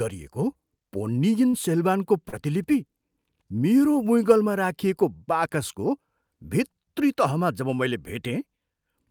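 Short concealed packet loss at 1.49–1.55 s and 2.29–2.34 s: about 40 ms of speech arrived too late, so the receiver extended the preceding sound, leaving brief smears.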